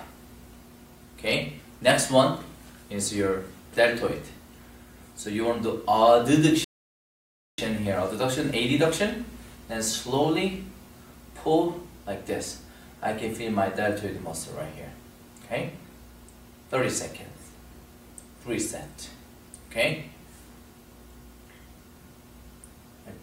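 At 6.64 s the sound stops dead and stays silent until 7.58 s, a rebuffering stall of about 0.94 s. The player used up its downloaded audio and waited for more to arrive. What marks it apart from a dropout or packet loss is the join: the sound picks up exactly where it broke off, with nothing skipped. The gap adds time rather than removing any of the audio.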